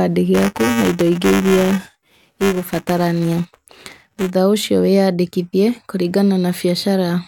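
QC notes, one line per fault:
0.34–4.31 s, buffer tearing: a robotic 345 Hz buzz over the speech, ending before "ũcio wĩyandĩkithie". A small slice of each period replays audio about 5 ms old, and the 345 Hz buzz rate fits a 128-sample buffer.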